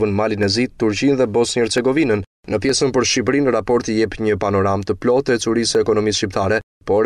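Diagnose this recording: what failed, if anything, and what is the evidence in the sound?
Dropped samples at 0.43, 1.78, 2.69, 3.69 and 5.75 s: isolated sharp clicks where the waveform skips a fraction of a millisecond, likely a driver or buffer slip.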